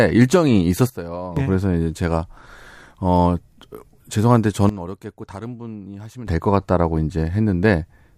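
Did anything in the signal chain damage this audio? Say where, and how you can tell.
Yes. The speech and its background noise drop together by about 14 dB from 0.90 to 1.37 s, and by about 15 dB from 4.69 to 6.27 s. Each time the level falls and returns abruptly, with no fade. This is a sudden gain jump, likely from a digital gain stage in the driver or buffer path applying a new setting between adjacent samples instead of ramping it. Because the noise floor moves with the speech, the change comes from the chain, not the talker.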